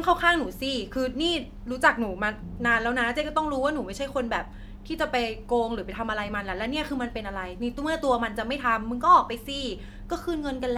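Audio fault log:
No faults heard anywhere in this speech recording.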